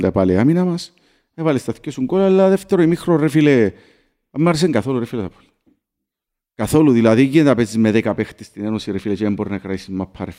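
No technical faults are audible.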